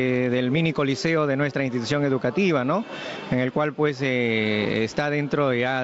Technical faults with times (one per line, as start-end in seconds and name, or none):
0.00-5.83 gain pumping